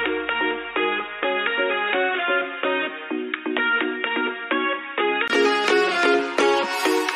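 From 0.0 to 5.30 s the sound is dull and boxy, with nothing above 3.8 kHz. It sits about 5 dB quieter, over a faint new noise floor. The input likely switched to a poorer device. Sound clears at 5.30 s after a 20 ms gap.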